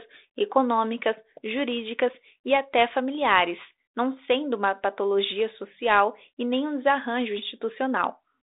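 The speech arrives through a G.726 ADPCM link at 32 kbit/s that confines it to the telephone band of roughly 300 Hz to 3.7 kHz with nothing above 3.8 kHz, leaving only a light coding texture and no faults.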